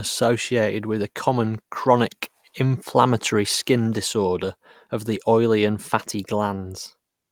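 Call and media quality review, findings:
Lost packet rebuilt from error correction at 4.45 s, between "common chronic inflammatory skin" and "of the oily and". A 20 ms stretch sounds rougher and noisier, fitting one lost packet. Opus in-band FEC played the next packet's low-bitrate copy. No gap or stretched repetition, unlike plain concealment.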